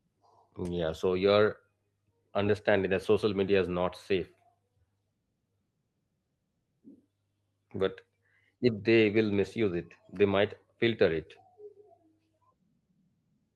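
No technical faults can be heard anywhere in the recording.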